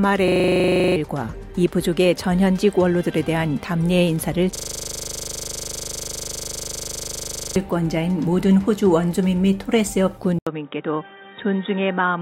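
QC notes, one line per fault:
0.28–0.96 s and 4.56–7.56 s, system hang loop: the same 40 ms slice of audio repeats exactly at 25 Hz, 17 times in the first run and 75 in the second. The system stalled while the hardware kept replaying its ring buffer, so the sound becomes a rough, rapid stutter and the real audio is gone, about three quarters of a second in the first run and about three seconds in the second. On the waveform, identical 40 ms cells tile the span. On a spectrogram, vertical striping at 25 Hz and a comb of lines spaced 25 Hz apart replace the normal content.
10.39 s to end, input switched to a poorer device: the input cuts to 80 ms of silence, then returns duller and boxier, with nothing above 3.8 kHz, a level drop of about 5 dB, and a faint new background noise well below the signal. The likely cause is a change to another microphone or a headset's call profile with a narrower band. 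On the spectrogram, a short blank gap is followed by a hard ceiling at 3.8 kHz and a different noise floor. On the waveform, a dropout is followed by a smaller envelope.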